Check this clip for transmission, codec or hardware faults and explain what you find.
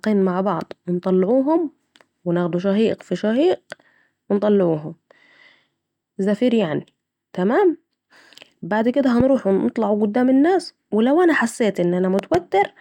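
Two hardware faults are present, both loud pops. The first comes at 9.20 to 9.23 s, after "بعد كده", and is a single sharp pop. The second, at 12.19 to 12.37 s after "الناس لو أنا حسيت", is two pops in quick succession. Each peaks about 10 dB above the speech, which carries on underneath. The likely cause is a sudden voltage step entering the signal chain, such as a plug, a switch or static.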